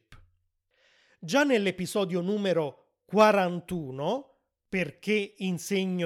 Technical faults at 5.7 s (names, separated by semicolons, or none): none